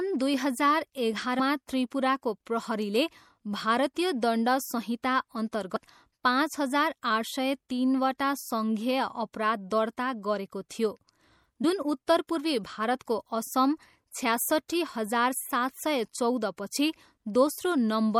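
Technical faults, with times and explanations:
Throughout: MP3 compression, plainly audible. Weak detail flickers in and out, giving a watery, swirly texture with chirpy sibilants. The likely cause is heavy MP3 encoding, which fits a low bitrate around 64 kbps.
1.38, 5.75 and 11.63 s: compressed frames skipped. At 1.38 s, after "दुई हजार" and before "त्रिपुराको प्रहरीले भारतीय दण्ड", about 100 ms vanishes. Before "पाँच हजार" at 5.75 s and "उत्तर पूर्वी भारतको" at 11.63 s, about 70 ms goes. Whole 24 ms frames are dropped, a few each time. Overlapping frames smear each join into a brief blip.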